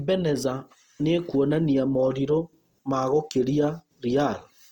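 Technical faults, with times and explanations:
Throughout, Opus compression: the speech has a rough, grainy texture, with tonal parts of the voice breaking into noise. That fits the codec's music mode at a low rate, likely around 24 kbps, filling starved bands with folded or noise content. The top end still reaches about 20 kHz.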